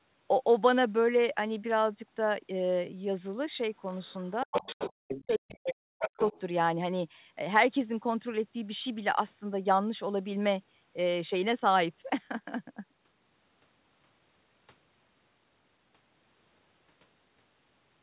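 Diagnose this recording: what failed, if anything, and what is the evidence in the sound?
Other side's voice leaking through, at the call-processing stage: a second voice sits under the talker at 3.86–4.13 s (about 35 dB down), 4.52–4.9 s (about 5 dB down), 5.1–5.72 s (about 10 dB down) and 6.05–6.4 s (about 15 dB down). This is likely residual loudspeaker echo the canceller failed to subtract. Unlike analogue crosstalk, it arrives in scraps and varies in level.

Speech suppressed in double talk: at 4.44–4.66 s and 4.9–6.17 s the talker's level collapses in pieces, by up to about 40 dB, for roughly 150 ms and then about a second in total. These drops partly overlap the stretches of leaked voice. A network dropout would not track the far side's activity this way. With both voices present, the echo canceller likely attenuates everything.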